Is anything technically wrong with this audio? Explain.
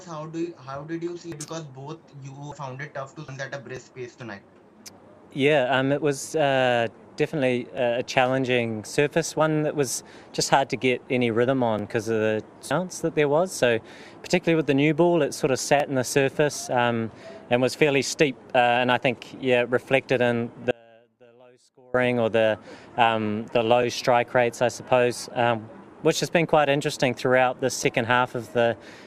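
Yes, three kinds of fault are audible.

At 1.32, 2.52, 3.28 and 12.71 s, compressed frames are skipped: the sound jumps forward by about 1 s, 0.7 s, 0.4 s and 0.7 s. The joins fit frames of roughly 85 ms. Each join is a jump ahead, not a gap, because time is lost rather than silenced.

Overlapping chunks cause a brief stutter at 3.77, 7.78, 11.79, 15.80, 19.81, 23.83 and 27.84 s. At each 4 s chunk boundary, the last 12 ms are played twice. Unlike the frame skips, these ticks recur at strictly regular intervals and repeat sound instead of losing it.

From 20.71 to 21.94 s, an audio dropout to a faint residue leaves only a trace about 30 dB down for about 1.2 s. This is likely a break in the signal path ahead of a stage that stayed live. Its abrupt edges rule out a pause or a fade.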